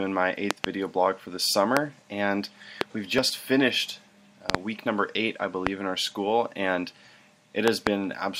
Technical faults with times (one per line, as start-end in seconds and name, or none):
0.51-0.66 loud pop
1.77-1.79 loud pop
2.81-2.83 loud pop
4.50-4.57 loud pop
5.67-5.69 loud pop
7.68-7.89 loud pop